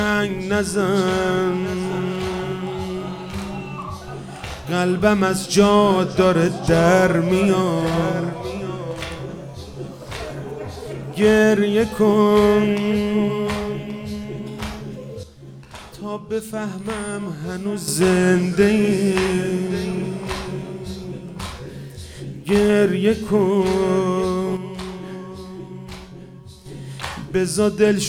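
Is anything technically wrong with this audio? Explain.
Yes. There are two sudden gain jumps. From 15.23 to 17.88 s the level drops by about 8 dB, and from 24.57 to 26.66 s by about 6 dB, snapping back each time. The sound and its background noise fall and recover together, likely from a digital gain change applied between consecutive samples without a ramp. On the waveform the envelope steps down and up squarely. A spectrogram shows every band darkening evenly, bounded by sharp vertical edges.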